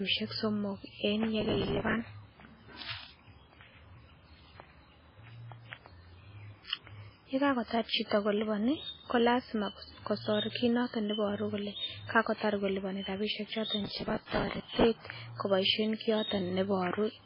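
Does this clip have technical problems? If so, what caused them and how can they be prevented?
Yes. The speech was likely squeezed through MP3 compression at a very low bitrate, around 16 kbps. Starved of bits, the encoder dropped weak frequency lines and removed everything above 5.3 kHz, leaving the whole clip dull, watery and swirly, with heavy codec damage and smeared attacks. To prevent it, encode at a much higher bitrate or keep an uncompressed original.

Processor overload crackle appears from 1.41 to 2.00 s and again from 13.84 to 14.84 s. The processor repeatedly failed to deliver small buffers, around 5 ms each, on time. Each miss replayed a fragment of old audio with hard edges. Dozens of these back to back make a gritty tearing over the speech. To prevent it, reduce the processing load or use a larger buffer so deadlines aren't missed.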